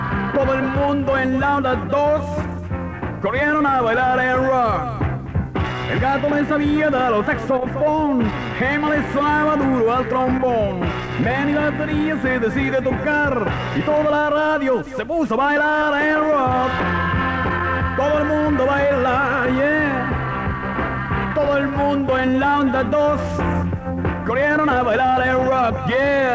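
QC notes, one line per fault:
No faults heard.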